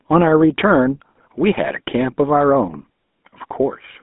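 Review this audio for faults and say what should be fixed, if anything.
GSM full-rate codec coding runs through the whole recording. The sound has the buzzy, gravelly roughness of a regular-pulse excitation scheme, in which the vocal-tract filter is driven by pulses that keep only every third excitation sample. This fits the 13 kbps full-rate codec. The band runs from about 200 Hz to 3.5 kHz, so everything above that is missing, and the codec damage is plainly audible. Capture the audio over a wideband path or a modern codec such as AMR-WB instead of GSM full rate.

GSM bit errors hit from 1.08 to 1.20 s. For about 120 ms the sound breaks into squawks, pops and gargling. Corrupted filter, pitch and gain parameters reach the decoder, which bends the spectrum and makes the level jump frame by frame. The span fits about six 20 ms frames being hit, and the density of damage points to a bit error rate of a few percent on a weak radio link. 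Ensure adequate signal strength, or use a link with stronger channel coding and bad-frame masking, so corrupted frames are concealed rather than decoded.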